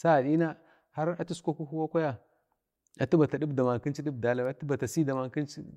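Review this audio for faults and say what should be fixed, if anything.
A bit error spike occurs at 4.45 s in this speech recording, heard as one sharp tick that has nothing to do with the surrounding sound. A single sample jumps to about -31 dBFS and then returns, which is what happens when one bit flips in memory or on a digital link: the value leaps by a power of two for an instant, spreading a brief click across the whole spectrum. Prevent it with error-checked storage and transfer, such as ECC memory and checksummed links.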